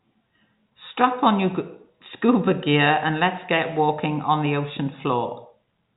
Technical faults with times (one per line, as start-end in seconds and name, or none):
none